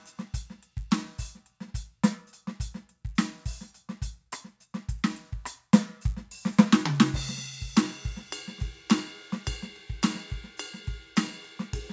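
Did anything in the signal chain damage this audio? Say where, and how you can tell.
Yes. Sample-rate conversion runs the resampler restarted on every block. Throughout the music there is a 100 Hz buzz, present only while signal plays. Each 10 ms block is converted in isolation, leaving an edge error on every block, consistent with a 44.1 kHz to 16 kHz conversion.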